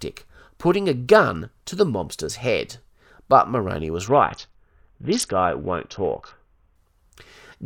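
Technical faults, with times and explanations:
4.07 to 6.76 s, Bluetooth SBC bit pool drop: the speech suddenly loses its treble and picks up a gritty, grainy noise layer, then recovers. The link appears to have congested, so the phone cut the SBC bit pool to keep audio flowing. The upper sub-bands received few or no bits and the remaining bands were coarsely quantised. The dullness and grit suggest the pool fell from around 28 to about 6, roughly a 60 kbps stream.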